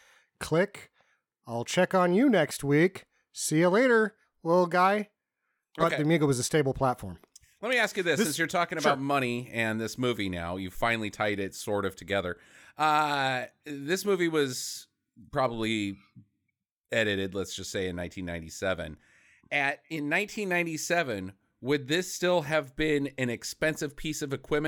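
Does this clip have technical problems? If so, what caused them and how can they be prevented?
No, the signal shows no technical problems that would need a cause explained or a prevention step.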